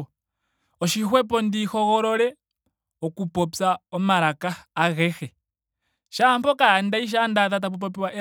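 No technical faults are audible.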